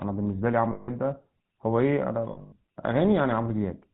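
From start to finish the speech has that buzzy, gravelly GSM full-rate codec character, which fits the old 13 kbps phone codec. It rebuilds the voice from a vocal-tract model fed by sparse pulses and keeps nothing above 4 kHz, so the roughness is plainly audible.

Lost GSM frames show up twice. From 0.72 to 0.89 s about 160 ms drops out, and the decoder keeps repeating the last good frame, so you hear a metallic ring. Around 2.32 to 2.57 s the losses are scattered over roughly 240 ms, with the longest gap about a tenth of a second, giving a choppy, ringing stutter.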